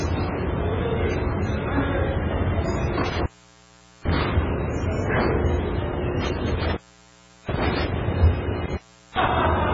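The clip is an everyday sound recording with heavy codec damage throughout: a watery, swirling texture with smeared attacks and nothing above 7.6 kHz. That is likely MP3 compression at a very low bitrate, around 16 kbps, where weak frequency lines switch on and off between frames and the treble is cut off. An intermittent contact also breaks the sound three times, as a loose cable or plug opens and recloses. The signal breaks up with crackle at the edges between 3.04 and 4.26 s (open for about 0.8 s in total), between 6.22 and 8.02 s (about 0.72 s open), and between 8.65 and 9.29 s (about 0.39 s open).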